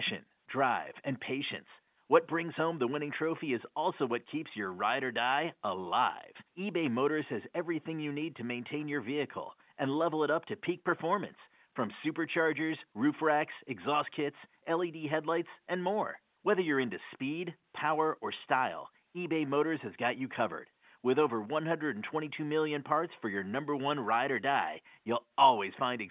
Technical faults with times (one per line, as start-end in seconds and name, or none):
none